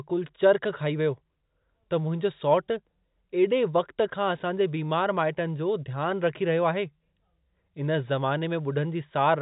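No technical faults can be heard anywhere in the speech. It carries the narrow sound of G.711 telephone coding, with nothing above 4 kHz and at most a faint quantisation noise riding along with the level of the voice.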